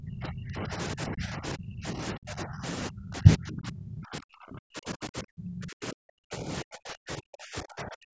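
From 0.0 to 2.65 s, then again from 2.89 s to the end at 8.1 s, the speech sinks and breaks up, down by roughly 30 dB and later about 40 dB. That's likely speech suppressed in double talk, with the echo canceller ducking the near talker while the far side spoke.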